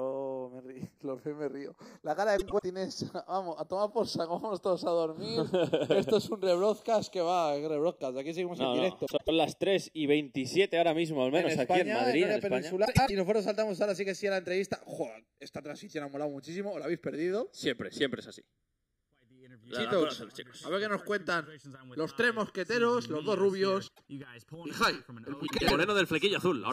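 Channels drifting apart runs through the whole clip. The two channels sit on separate clocks that differ by something like 20 parts per million, so their offset creeps to under a millisecond by the end. Summed to mono, the comb notches sweep slowly, heard as slow flanging.

Frames out of order occurs at 2.38–2.63 s, 9.06–9.29 s, 12.85–13.11 s, 23.87–24.04 s and 25.47–25.71 s. Two neighbouring blocks of 104.5 ms (78.4 ms at 23.87 s) play swapped, giving a garbled flutter. No time is lost.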